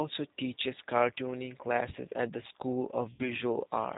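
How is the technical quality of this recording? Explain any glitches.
The technical quality is limited. The whole clip is band-limited, narrowband speech, and there's one short dropout near the end.

Throughout, it sounds like the G.729 codec: nothing above about 4 kHz, with a rough, slightly synthetic edge. The speech is rebuilt from a vocal tract filter, pitch predictor and a few pulses per frame. That's plainly audible here and fits an 8 kbit/s G.729A stream.

From 3.13 to 3.25 s there's VoIP packet loss concealed by the speech codec. About 60 ms of audio went missing, which fits roughly three lost packets. The decoder stretched its last pitch and filter into a fading buzzy tone or coloured noise, and the speech stays weak briefly afterward.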